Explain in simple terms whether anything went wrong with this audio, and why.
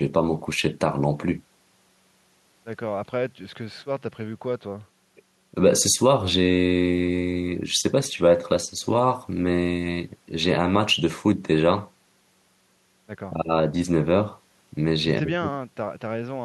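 Nothing went wrong with this speech recording. Listening closely, there is no moment where a technical problem can be heard.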